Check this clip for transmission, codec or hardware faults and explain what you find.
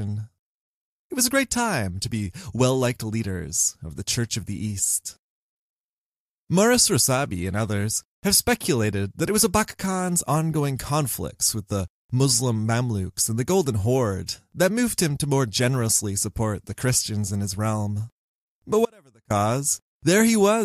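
One fault, an audio dropout to a faint residue from 18.85 to 19.30 s: the signal path likely broke while staying live, so the speech abruptly drops to a faint leak about 35 dB down for roughly 0.45 s.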